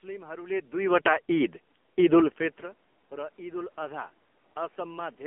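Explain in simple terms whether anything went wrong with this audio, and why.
AMR narrowband mobile codec, throughout: an old phone-network coder cut everything above 3.4 kHz and rebuilt the speech from a rough model, leaving it muffled, buzzy and synthetic.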